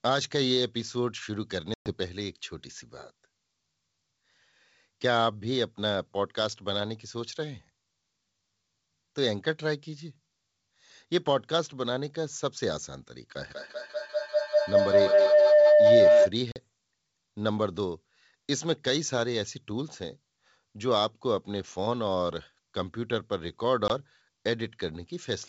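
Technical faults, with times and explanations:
1.74–1.92 s, 16.52–16.57 s and 23.88–23.91 s, packet loss on an ADPCM call: hard-edged silent gaps of 120 ms, 40 ms and 20 ms, the first fitting several lost packets. Afterwards the decoder's predictor and step size no longer match the sender's, so the sound resumes slightly distorted before settling.
13.5–16.36 s, feedback howl: two devices in the same room form a microphone-to-loudspeaker loop with gain above unity. Each pass grows louder and narrower, converging on a tone near 700 Hz with repeats roughly every 200 ms, peaks about 8 dB above the speech, and stops at 16.36 s.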